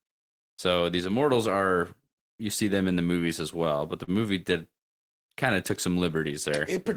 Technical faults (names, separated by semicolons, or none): repeated stalls (stutter)